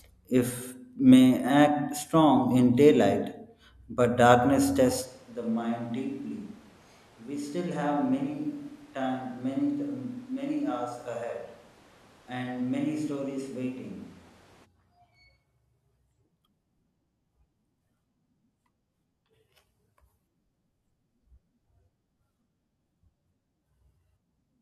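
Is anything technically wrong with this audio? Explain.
Yes. From 5.06 to 14.64 s, a switch to a distant microphone likely occurred. The far pickup makes the speech abruptly roomy, hollow and thin, roughly 10 dB quieter, with more audible room noise.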